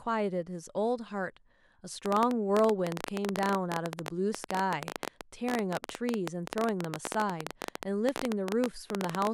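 From 2.06 s to 9.28 s, a busy, uneven ticking runs over the speech, carrying on through the pauses as well. The clicks are all of much the same shape, arrive at an irregular pace of about 15 per second, roughly a hundred in all, and their peaks stand around 20 dB above the speech. This train of clicks is likely interference from nearby equipment or a faulty connection or power supply repeatedly injecting short pulses into the signal.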